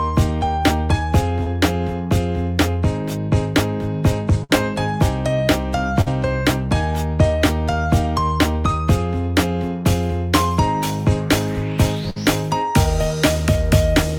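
Three short bursts of packet loss, at 4.44, 6.01 and 12.10 s: each time roughly 50 ms of the last sound is stretched and faded out, then the audio jumps ahead, skipping 40 to 60 ms.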